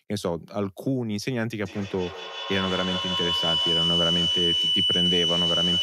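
From 1.6 s to the end, a shrill tone near 3 kHz rises out of the speech, pulsing roughly every 150 ms and peaking about 2 dB above it. This is feedback howl: sound circling between two devices in the same room gained level on each pass.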